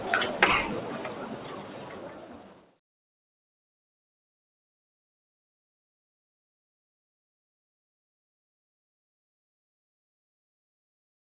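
A speech-tuned noise suppressor stays active throughout, treating sustained parts of these sounds as noise, so held portions and tails sink by roughly 5 dB while attacks pass, causing audible pumping. Everything sits below 4 kHz, consistent with a narrowband G.711-style call path.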